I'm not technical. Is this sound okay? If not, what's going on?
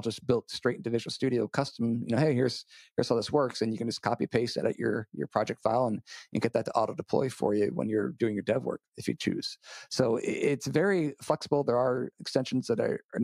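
Yes, this sound is okay. Nothing in it points to a technical problem, so there is nothing here that needs explaining or fixing.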